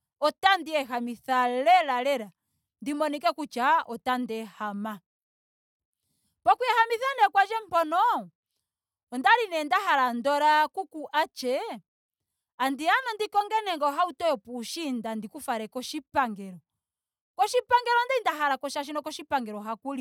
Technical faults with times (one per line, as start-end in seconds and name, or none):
none